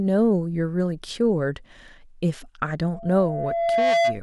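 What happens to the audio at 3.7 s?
Loudspeaker feedback squeal, 2.92 to 4.20 s: the microphone picks up its own loudspeaker, so a 676 Hz tone builds over about a second until it sits about 5 dB above the speech.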